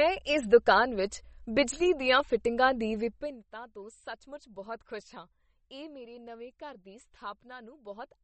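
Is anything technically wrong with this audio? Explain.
Yes. Throughout the speech the sound is watery and swirly, with plainly audible damage and nothing above 8.4 kHz. This is likely MP3 compression: short of bits, the encoder cuts the treble and drops weak detail frame by frame, which fits a bitrate around 32 kbps.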